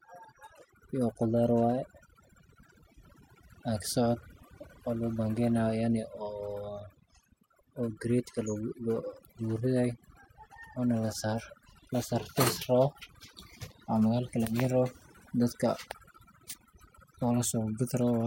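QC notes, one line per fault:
Throughout: overdone noise removal. The denoiser pulls bands near its noise estimate down hard, leaving twinkling specks in near-silent gaps.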